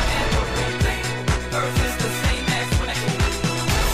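Nothing in this audio stands out as a technical problem; there's no fault to point to anywhere in it.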